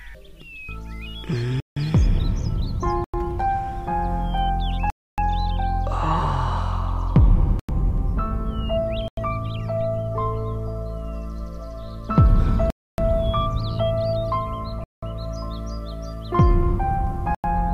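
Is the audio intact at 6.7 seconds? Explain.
Yes, at 6.7 seconds the audio runs through cleanly, with no dropout, click, glitch or other fault at that point.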